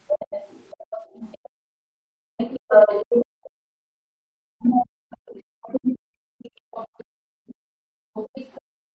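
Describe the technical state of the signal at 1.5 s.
The echo canceller likely failed to remove the loudspeaker signal, so other side's voice is leaking through from 0.07 to 3.0 s, sitting roughly 10 dB below the speech. With both sides talking, the canceller likely treated the near talker as echo, causing speech suppressed in double talk between 1.21 and 8.23 s: the voice dips by up to around 40 dB in pieces. From 1.52 to 2.27 s the canceller also clamps the microphone, so the background is gated by the echo canceller and the room sound drops by about 40 dB before returning.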